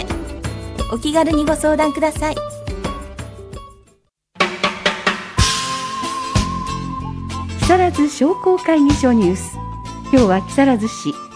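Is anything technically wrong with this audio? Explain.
No, nothing technically wrong stood out on listening to this audio.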